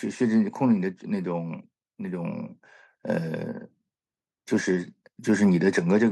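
No technical faults can be heard anywhere in the recording.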